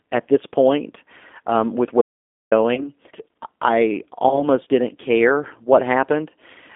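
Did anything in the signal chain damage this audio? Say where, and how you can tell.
Yes. At the codec stage, the whole clip is confined to roughly 250 Hz to 3.6 kHz and has the plainly audible rough, synthetic texture of a G.729 codec, which fits an 8 kbit/s G.729A coder that rebuilds speech from a filter, pitch predictor and sparse pulses.

From 2.02 to 2.52 s there is an audio dropout to silence lasting half a second: the signal cuts out mid-flow to silence with no room tone underneath. That points to the input feed being lost, likely a momentary device or link failure, while the recorder kept writing samples.

On the network side, VoIP packet loss concealed by the speech codec appears at 2.75 to 2.88 s and 4.29 to 4.48 s. Each time roughly 20 ms of sound, which fits a single lost packet, is replaced by a stretched buzzy tone or coloured noise that fades, and the sound stays distorted for over 100 ms while the decoder rebuilds its state.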